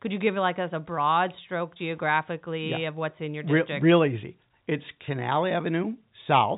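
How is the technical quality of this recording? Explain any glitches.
No glitches can be heard: the speech arrives as a steady G.711 telephone-coded signal, with nothing above about 3.8 kHz, as that format allows.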